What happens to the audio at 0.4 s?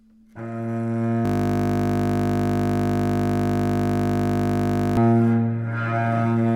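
Nothing goes wrong at 0.4 s: the sound plays through that moment intact, with no dropout, click, distortion or other fault.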